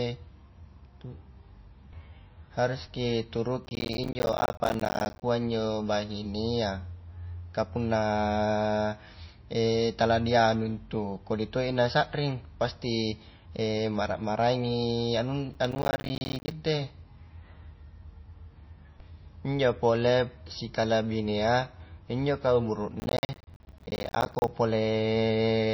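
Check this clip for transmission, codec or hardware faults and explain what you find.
Two problems show up in this speech: a codec problem running the whole way through, and three bursts of crackle that come and go.

The constant one is almost certainly MP3 compression. There's nothing above about 5.8 kHz, and the treble is cut off sharply, so the speech sounds dull and a bit watery. Quieter detail seems to flicker in and out, and the s sounds go swirly. That's what happens when the encoder runs short of bits. It drops the high band at a fixed point and zeroes out weak frequency lines frame by frame. The damage is plainly audible and points to a very low bitrate, something around 25 kbps.

The intermittent fault is processor overload crackle, at 3.65 to 5.22 s (ending right before "injo bahinea"), 15.54 to 16.51 s, and 23.0 to 24.48 s (starting just after "pole sikalabinea injo kau"). In each stretch the machine couldn't finish its small audio buffers on time, and it missed dozens of them in a row. 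Every miss drops in a hard-edged slice of silence, and the gaps are short, which fits buffers of around 10 ms. All those tiny dropouts blur into a gritty, tearing crackle over the speech, and it stops as soon as the load eases.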